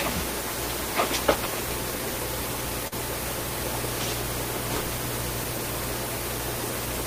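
From 2.87 to 2.94 s the sound briefly smears: short concealed packet loss, where 40 ms never arrived and the receiver stretched the preceding audio across the gap.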